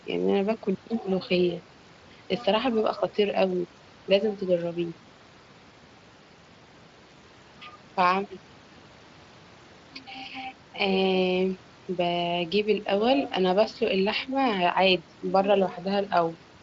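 No technical faults occur at any point in the speech, so there is nothing to describe in time order.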